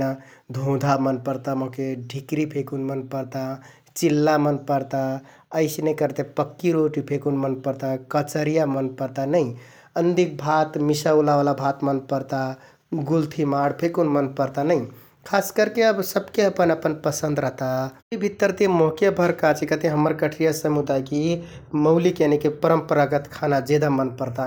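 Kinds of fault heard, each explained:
Nothing stood out on listening to the speech here; no technical fault could be heard at any point.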